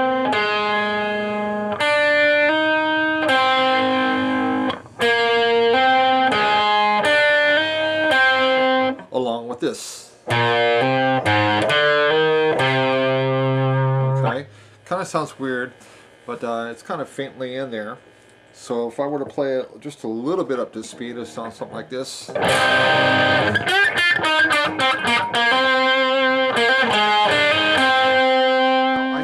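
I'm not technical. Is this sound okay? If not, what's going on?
Yes, nothing here sounds wrong or broken.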